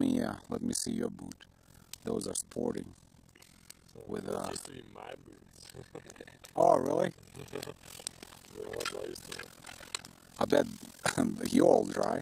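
A fast, rough flutter runs through the whole clip, chopping the sound into a rough tremolo that never lets up. The level swings by about 60 dB around 40 times a second, so the audio nearly vanishes between pulses. This is overlap-add ripple: the audio was split into windowed frames and rebuilt with an overlap whose windows fail to add up to a steady gain, leaving a level dip at every frame boundary.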